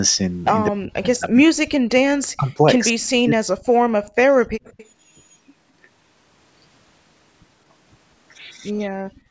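Between 0.71 and 1.85 s, 2.04 and 2.54 s, 2.93 and 3.62 s, and again from 8.96 to 9.13 s, the speech dips by up to around 40 dB. The likely cause is speech suppressed in double talk, with the echo canceller turning the talker down along with the far side.

From 4.03 to 4.16 s, the background is gated by the echo canceller, which clamps the microphone while the loudspeaker plays, so the room sound drops out by about 34 dB.

From 4.64 to 4.87 s, a faint delayed copy of the speech trails 207 ms behind, roughly 25 dB below it, likely an echo leak from a loudspeaker.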